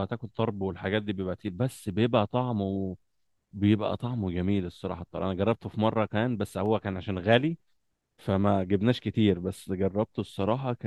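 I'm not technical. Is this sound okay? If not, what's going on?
No, there are three short clicks in the speech, at 1.91, 6.66 and 10.23 seconds, likely dropped samples, where a tiny sliver of audio goes missing.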